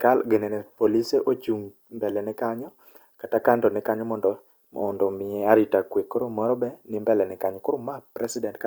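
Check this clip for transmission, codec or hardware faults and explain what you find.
No faults detected.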